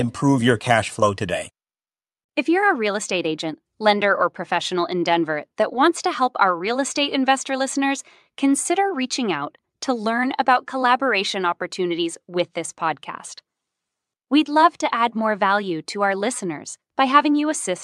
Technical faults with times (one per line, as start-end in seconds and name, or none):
none